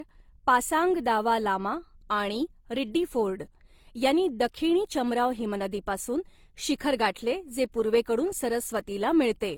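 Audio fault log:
throughout: transcoding between lossy codecs. The speech carries two layers of coding damage at once. One layer fits a low-rate Opus pass at around 24 kbit/s, and over it sits the synthetic-sounding treble of spectral band replication, which fits HE-AAC at around 40 kbit/s. The second encoder spends bits on the first one's artefacts rather than the speech. Nothing is present above 18.5 kHz. A chain of re-encodes is the likely cause.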